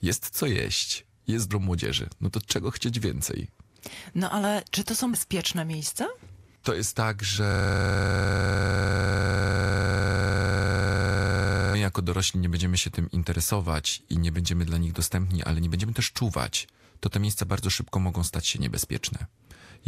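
From 7.52 s to 11.75 s, a system hang loop repeats one 42.67 ms slice about 99 times. The result is a rapid 23.4 Hz machine-gun stutter, fitting a frozen 2048-sample buffer.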